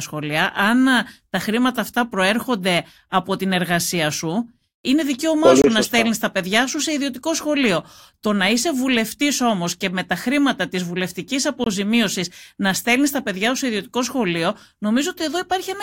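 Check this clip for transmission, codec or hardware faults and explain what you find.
The speech has one transmission fault, occurring twice. A gap between chunks at 5.62–5.64 s and again at 11.64–11.66 s: the audio arrived in 6-second chunks with 23 ms of silence inserted at each join, which suggests codec padding or late chunk playback. Nothing is lost, but each join is a brief hole.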